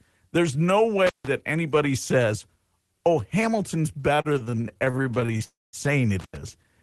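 It's a speech clip with three flavours of trouble. There's intermittent contact at 1.07–1.27 s and again at 6.19–6.37 s: a loose plug or cable opening up, so the sound drops out for about 157 ms and then 91 ms, with crackle at the edges and just faint hiss in between. From 4.15 to 5.43 s there are repeated stalls (stutter), about twenty short holds of up to 34 ms each where the jitter buffer kept running dry. The receiver stretches the last sound to fill them, around 405 ms in all, roughly a third of that span, so the audio drags and stutters without losing anything. Right after that, from 5.44 to 5.76 s, comes a call audio freeze. The sound is held and fades, with about 200 ms of it near-silent and 291 ms padded in total, then picks up where it left off with nothing missing but arriving that much later, likely because packets got held up in transit. Underneath it all you can hear an Opus-style call path, band-limited to about 12 kHz, with coding texture that points to roughly a 20 kb/s stream.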